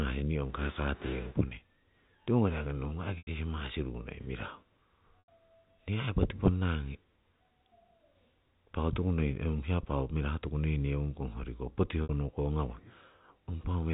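Packet loss with pitch repetition occurs at 3.18 to 3.27 s and 5.19 to 5.28 s (90 ms each) and at 12.03 to 12.09 s (60 ms). The receiver fills each gap by repeating the last pitch period, so the speech briefly holds as a buzzy sustained tone.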